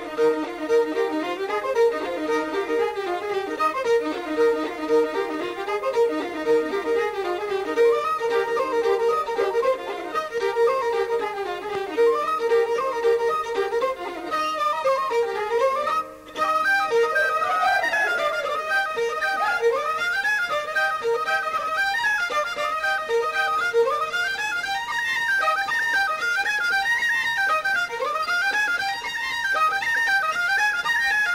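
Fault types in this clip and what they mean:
Crude rate conversion: Throughout the clip, the sample rate was stepped up without any filtering, simply by repeating the nearest existing sample. The pattern of repeats fits a change from 44.1 kHz to 48 kHz. This leaves a periodic timing error that creates tones unrelated to the material, heard as a gritty, inharmonic fizz that rides on loud and bright passages, roughly 25 dB below the signal itself.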